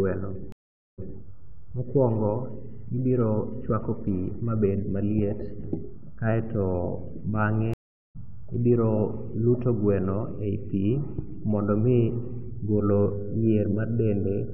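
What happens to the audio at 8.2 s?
At 8.2 s the speech is coming back from a stream reconnect. The sound drops out from 7.74 to 8.17 s, a gap of about 0.41 s, while the player rebuilds its connection and decoder. It resumes roughly half a second further on, so that part of the speech is skipped.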